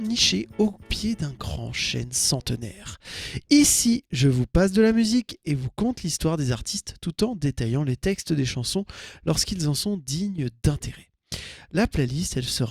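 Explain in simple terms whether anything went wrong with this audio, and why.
Nothing went wrong here: the audio runs along steadily the whole way, with no dropouts, glitches or odd sounds to point to.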